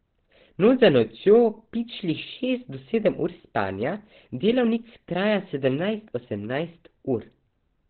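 From start to finish the speech is band-limited, with nothing above 4.5 kHz, so consonants lose their sibilance and the sound is muffled and boxy. The damage is heavy: vowels have a hoarse, rasping texture. The likely cause is Opus compression running in its SILK speech mode at narrowband, which fits a very low bitrate of around 12 kbps. At that rate the encoder models the voice crudely rather than preserving its detail.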